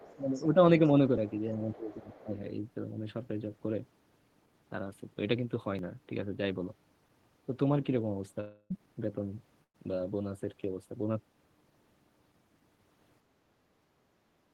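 Right from the start, 0.0 to 0.45 s, there's faint other side's voice leaking through, about 25 dB under the talker, likely loudspeaker echo the canceller missed. It shows up again, fainter at about 30 dB down, at 1.29 to 1.40 s, then at 1.91 to 1.96 s and 2.13 to 2.25 s at around 25 dB down.

Speech suppressed in double talk follows. At 0.45 to 0.57 s there's a brief dip of about 5 dB. From 1.48 to 2.38 s the talker sinks by up to about 15 dB over roughly 0.7 s, likely because the canceller ducked everything while both sides overlapped.

There's a dropped buffer (overrun) at 1.18 s and another at 5.79 s. Each skips forward about 15 ms, likely from samples overwritten before they were read.

At 8.40 to 8.72 s a long network dropout hits. Roughly 0.3 s goes missing, likely from a stall in arrival. It's filled by a fading buzz or hiss, with a hair of silence before the audio resumes further on.

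Last, a burst of packet loss at 9.64 to 9.76 s drops about 100 ms. It's papered over with a decaying continuation of the last sound, then picks up past the gap.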